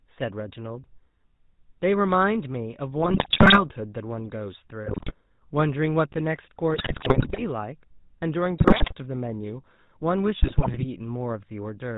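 Throughout, the speech carries plainly audible GSM full-rate codec damage, consistent with a 13 kbps full-rate encoder. It rebuilds the vocal tract from sparse pulse excitation and passes nothing above 4 kHz, giving a dull, buzzy, gravelly band-limited sound.

GSM bit errors break in at 3.02 to 3.64 s, 4.86 to 5.13 s, 6.74 to 7.42 s, 8.58 to 8.93 s and 10.42 to 10.85 s. Corrupted filter, pitch and gain values warp frames into squawks, pops and gargling. The burst at 6.74 s is the most damaged.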